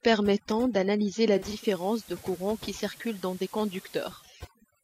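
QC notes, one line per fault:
throughout: overdone noise removal. The noise reduction is working far too hard on this speech, pulling individual frequency bands down to almost nothing whenever they sit close to its idea of the noise floor. The background collapses into near silence scattered with twinkling, chirpy specks, and the quieter components of the voice are removed along with the noise.
1.32–4.37 s: digital radio blending to analogue. The receiver loses the digital stream and cross-fades over roughly a third of a second (331 ms) to the FM broadcast of the same station, then blends back near 4.37 s. On the analogue side the level drops by about 4 dB, and hiss rises to roughly 20 dB under the speech, audible as a lift in background noise.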